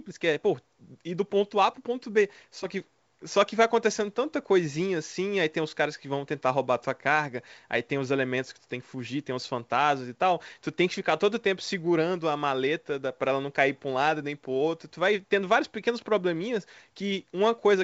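No technical faults heard.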